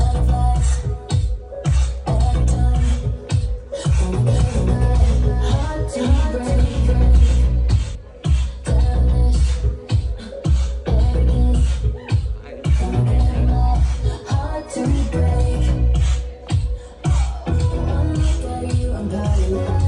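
A doubled audio track runs from 4.15 to 7.95 s: a second copy sits about half a second behind, equally loud and starkly echoed, likely from a slower capture path.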